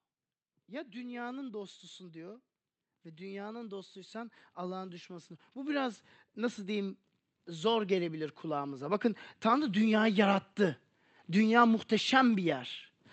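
From 0.66 s to 10.54 s the speech and the background noise swell together, climbing by about 19 dB over nearly ten seconds. This is automatic gain rising: the gain control judged the input too quiet and kept raising its level. The call codec's coding, with its top end cut near 8 kHz, fits Opus at a moderate bitrate.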